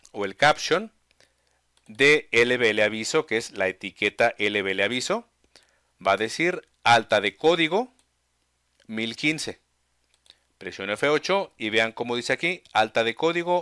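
No faults are audible anywhere in this audio.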